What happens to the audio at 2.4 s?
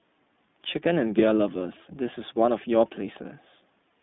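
At 2.4 s the speech carries iLBC codec damage, present throughout: each roughly 20 ms frame is coded independently, giving a rough, synthetic grain, not just the muffling of a plain low-pass, with nothing above 3.8 kHz.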